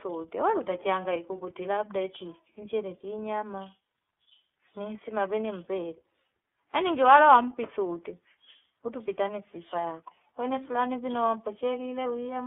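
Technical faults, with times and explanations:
throughout: iLBC codec. The speech is confined to a telephone band of roughly 250 Hz to 3.4 kHz and carries a plainly audible rough, slightly synthetic texture. Each 30 ms block is coded on its own, without drawing on the block before, which fits iLBC's 13.33 kbps mode. That independent coding leaves a grainy unevenness. A plain band-limiting filter or G.711 line would sound muffled but smooth, without this coarse, buzzy quality.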